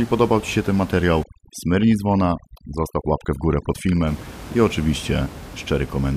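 It's a speech recording. Right after "się ten materiał", from about 1.23 to 4.07 s, you get overdone noise removal: the room noise, sitting about 17 dB under the speech, drops and breaks up into little twinkling specks.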